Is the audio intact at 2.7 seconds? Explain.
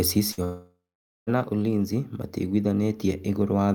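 Yes, the speech at 2.7 seconds is intact, with no fault to be heard at that moment.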